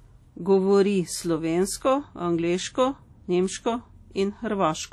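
Speech, with plainly audible codec damage throughout: ringing, washy smearing and hiss that breathes with the signal, likely WMA compression at something like 48 kbps.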